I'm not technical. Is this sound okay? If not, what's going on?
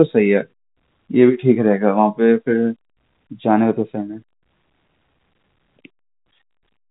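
Yes, it's fine: the speech simply has the slightly narrow sound of an ordinary landline phone call, since phone lines carry nothing above about 3.8 kHz.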